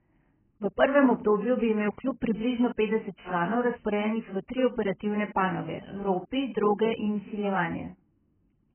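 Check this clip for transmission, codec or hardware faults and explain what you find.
One fault runs through the whole clip: AAC compression, likely from an AAC-LC encoder starved of data, at a very low bitrate around 9 kbps. Lacking bits, it cut everything above 3.1 kHz and coarsely quantised what remained, so the speech sounds dull and smeared, with warbling and fizzy sibilants.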